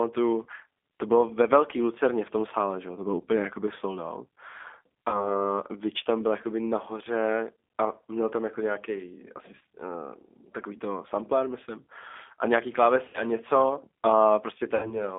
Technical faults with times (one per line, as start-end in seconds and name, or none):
0.00-15.18 G.729 codec
0.44-0.46 VoIP packet loss concealed by the speech codec
5.09-5.42 VoIP packet loss concealed by the speech codec
9.59-9.61 VoIP packet loss concealed by the speech codec
13.08-13.25 VoIP packet loss concealed by the speech codec
14.75-15.01 VoIP packet loss concealed by the speech codec